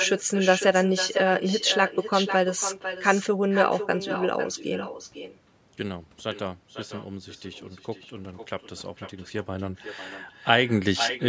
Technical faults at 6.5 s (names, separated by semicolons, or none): echo with no canceller